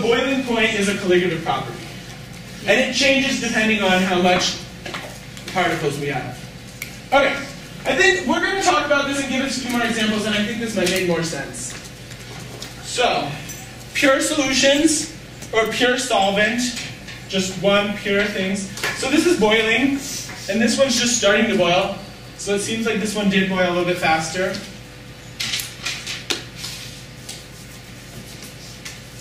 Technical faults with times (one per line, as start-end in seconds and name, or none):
8.38-8.61 sudden gain jump